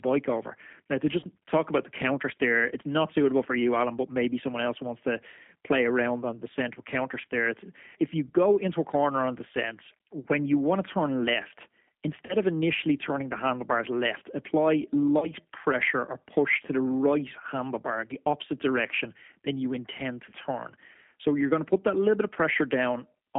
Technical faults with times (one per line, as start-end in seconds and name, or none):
0.00-23.39 G.729 codec
1.20-1.25 VoIP packet loss concealed by the speech codec
7.21-7.25 VoIP packet loss concealed by the speech codec
12.26-12.34 VoIP packet loss concealed by the speech codec
15.19-15.33 VoIP packet loss concealed by the speech codec
20.30-20.35 VoIP packet loss concealed by the speech codec